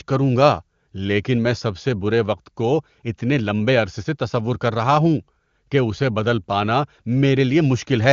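No technical faults can be heard in this speech.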